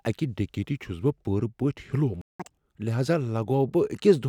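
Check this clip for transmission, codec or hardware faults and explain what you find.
Two linked faults appear in this speech clip: a playback stall followed immediately by catch-up at higher speed.

Playback stall, 2.21 to 2.40 s: the speech cuts to silence mid-flow for about 181 ms. The likely cause is the player running out of buffered data, or its output thread being blocked, so nothing reached the output until it recovered.

Catch-up at higher speed, 2.40 to 2.58 s: once output resumes, the player plays its backlog at 2.0 times normal speed by resampling. That raises the pitch by about ten semitones, giving a brief squeaky, hurried burst before the speech drops back to normal rate.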